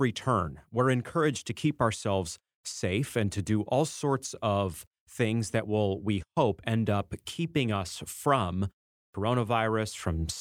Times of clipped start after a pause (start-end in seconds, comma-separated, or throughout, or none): 9.10-9.14